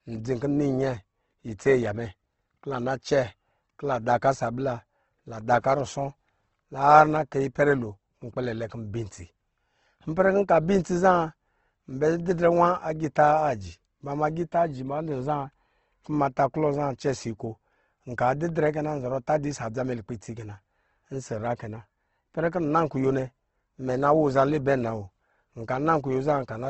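From start to finish the speech is dull and grainy, with nothing above 8.2 kHz: likely Opus compression at a low bitrate, roughly 16 kbps, noise-filling thin bands.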